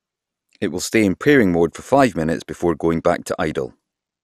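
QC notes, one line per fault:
Throughout: MP2 compression, likely. The speech sounds dull and gurgly, nothing above 14.3 kHz, grainy coarse quantisation, fitting roughly 80 kbps Layer II.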